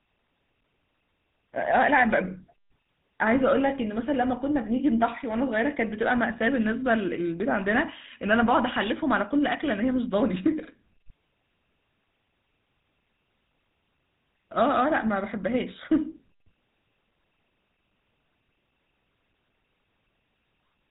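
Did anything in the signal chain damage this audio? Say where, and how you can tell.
Yes. The damage sits at the codec stage: the whole clip carries the sound of the GSM full-rate codec, which points to the 13 kbps full-rate scheme. Nothing above about 3.8 kHz survives, so sibilants and breath lose their top end. The codec damage is plainly audible as a buzzy, gravelly roughness on the speech. The codec models the vocal tract and excites it with sparse, regularly spaced pulses. Discarding most of the excitation detail that way produces the grainy texture.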